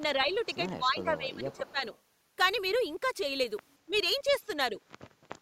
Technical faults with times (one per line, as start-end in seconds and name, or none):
0.00-5.42 filter restarted on every block
0.16-0.32 speech suppressed in double talk
0.30-0.55 echo leak
0.72-1.82 speech suppressed in double talk
1.52-1.99 echo leak
3.86-3.94 speech suppressed in double talk
3.93-3.98 echo leak
4.72-4.79 speech suppressed in double talk